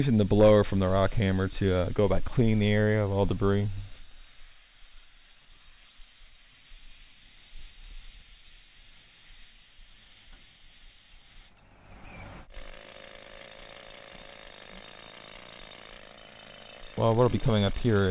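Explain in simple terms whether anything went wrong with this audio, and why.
Nothing went wrong with this audio, and there are no faults to point to.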